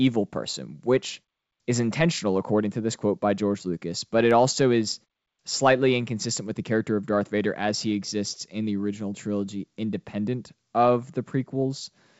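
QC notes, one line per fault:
No faults to flag here: the speech comes through G.722 wideband telephone coding at 64 kbit/s, so it sounds clear up to about 7 kHz with a faint hiss up top, and the pauses fall quiet as the output mutes between phrases.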